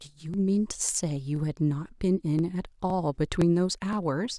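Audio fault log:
0.34, 0.85, 1.36, 1.88, 2.39, 2.90, 3.42 and 3.93 s: overlapping chunks. Each half-second chunk starts 13 ms before the previous one ended, so that sliver of speech plays twice. This gives a brief stutter-click every 0.51 s. Unlike dropouts, nothing goes missing; audio is duplicated.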